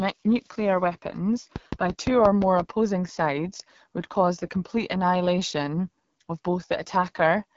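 Throughout the speech, the AMR wideband (HD Voice) codec damage is plainly audible. The sound is rough and raspy, which fits one of the lowest AMR-WB rates, around 8.85 kbit/s. Its speech model is starved of bits. Nothing is heard above 7.5 kHz.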